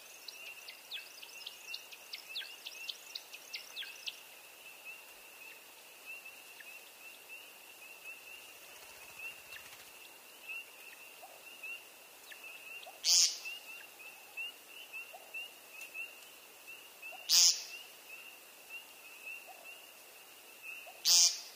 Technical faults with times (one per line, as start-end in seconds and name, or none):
none